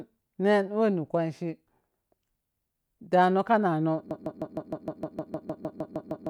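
At 4.11 s, just after "ka nano", the speech locks into a broken-record loop: a fragment of about 154 ms repeats exactly, back to back, 14 times, and the loop runs through to the end of the clip. It sounds like a rapid, mechanical stutter with no variation between repeats. The likely cause is a stalled player, encoder or stream resending its last buffered fragment, so the speech that belonged there is lost.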